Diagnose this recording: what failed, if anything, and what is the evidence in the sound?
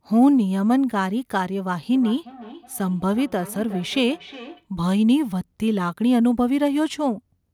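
The failure is in call processing: a feedback echo between two devices from about 1.94 s to 4.67 s. Each stretch of speech returns roughly 0.4 s later, peaking at about 19 dB below the direct voice. A second device in the room plays the far-end audio into the microphone, and the microphone's own echo canceller cannot remove sound its device did not play. On a spectrogram, faint copies of each syllable's pattern trail the originals at a steady 0.4 s offset.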